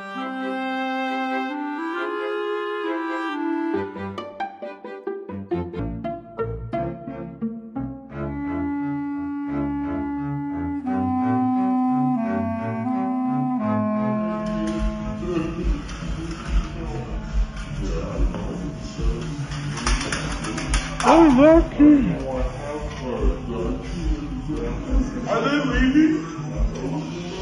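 From 5.79 s to the end, the audio runs as a section at the wrong speed: playback drops to 0.648 times the original rate, so everything after that point is slowed and pitched down together, roughly seven semitones lower. The cause is likely a clock or rate mismatch in editing or playback, where material was read out more slowly than it was written. The change is abrupt, and the remainder sounds deep, dragged and sluggish.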